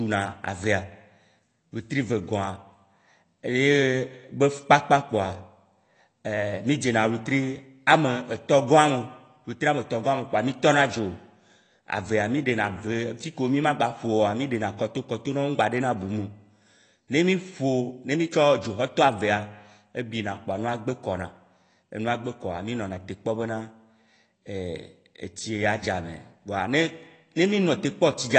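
Dull, band-limited speech with a watery, warbling smear on vowels and fizzy sibilants throughout, with nothing above about 8.7 kHz. The likely cause is AAC compression (AAC-LC) starved of bits, which fits a bitrate around 32 kbps, lowering the cut-off and leaving spectral holes.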